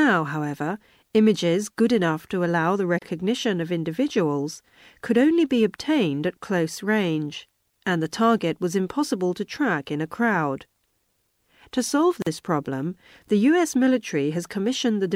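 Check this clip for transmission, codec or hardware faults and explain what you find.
The speech has two gaps at joins of encoded pieces. The first runs from 2.99 to 3.02 s, after "enough to allow the" and before "of individuals could only". It lasts about 31 ms. The second runs from 12.22 to 12.27 s, just before "problem the", and lasts about 44 ms. The pieces were encoded separately and joined untrimmed. The encoder's start delay and last-frame padding both remain. Each join opens a brief silence with smeared edges. Then the speech resumes where it stopped.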